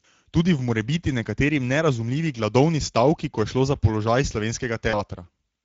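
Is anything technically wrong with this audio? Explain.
Yes, two faults can be heard.

Speex codec damage runs through the whole clip. The character points to Speex at roughly 16.8 kbps. At that rate the CELP coder has too few bits to model the excitation cleanly, so the speech comes across as noticeably hoarse and grainy, with a rough, slightly synthetic edge. On a spectrogram the harmonic striations look smeared and broken up, and noisy texture fills the gaps between them. The waveform keeps its envelope but loses fine detail.

VoIP packet loss concealed by the speech codec occurs from about 4.89 to 5.04 s. Around 40 ms of audio went missing, which fits two lost 20 ms frames. The decoder filled the gap by repeating its last pitch and spectral shape while turning the gain down. The result is a brief stretched sound that fades, and the speech stays weak for a moment after it resumes. A spectrogram shows a frozen, repeated spectral shape instead of natural movement, and the waveform shows a tapering stretch.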